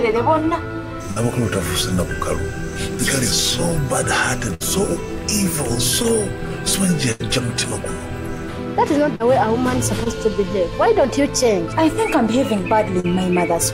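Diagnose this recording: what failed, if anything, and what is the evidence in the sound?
Network stage, burst of packet loss: three gaps at 1.11 to 1.18 s, 4.54 to 4.62 s and 7.12 to 7.22 s, with about 40, 60 and 80 ms of audio missing. Consecutive packets arrived too late or not at all. The receiver extended the last decoded sound for 47, 61 and 80 ms, letting it decay as the gap lengthened, then resumed further along, so the held, fading tail is followed by a jump past the lost material.

Network stage, short concealed packet loss: brief holes at 6.02 to 6.06 s, 9.16 to 9.22 s, 10.04 to 10.08 s and 13.00 to 13.06 s, each losing 20 to 40 ms. The decoder synthesised a continuation of the preceding sound for 14 to 41 ms and cross-faded back into the received audio. Each one is a short smear or wobble at the splice.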